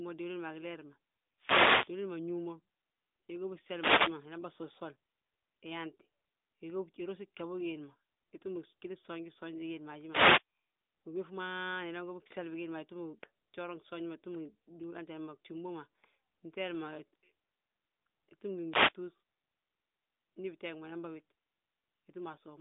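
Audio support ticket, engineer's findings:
Wireless microphone noise hit, FM radio link. RF fades as multipath reflections cancel, receiver noise rises, heard as short static swishes. Four hits: 1.38–1.94 s; 3.74–4.18 s, just before "inan bà sosol"; 10.09–10.43 s, right after "ma haji"; 18.70–18.94 s. The static sits inside the narrowband phone channel, topping out near 3.7 kHz, consistent with AMR-NB transport downstream.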